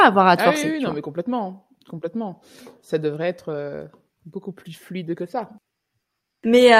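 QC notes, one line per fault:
No faults heard anywhere in the speech.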